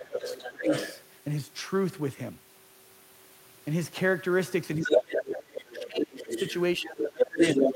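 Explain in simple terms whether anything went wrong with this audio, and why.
Two things go wrong here, and they happen together three times.

First, speech suppressed in double talk. At 0.0 to 0.71 s, 4.78 to 6.32 s and 6.77 to 7.61 s, the main talker gets pulled well down. That's likely the echo canceller getting confused: the other person was coming out of the loudspeaker while this person was talking, and the canceller couldn't tell the two apart, so it turned everything down, including the voice you actually want.

Second, the other side's voice leaking through. Over roughly the same stretches, 0.13 to 1.02 s, 4.83 to 6.54 s and 6.89 s to the end, a second voice comes through from the loudspeaker. That's likely the same canceller failing to scrub the far end out of the microphone. In the first stretch it's a bit quieter than the talker, in the middle one it's about as loud, and in the last it's actually a bit louder.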